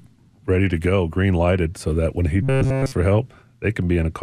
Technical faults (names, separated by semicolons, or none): robotic sound from repeated short buffers